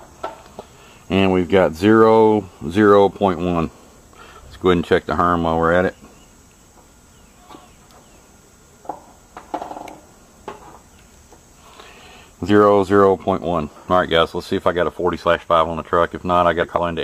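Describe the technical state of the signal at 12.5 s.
At 12.45 to 12.51 s, compressed frames are skipped: whole coded frames never reach the output, so the audio jumps ahead by roughly 50 ms.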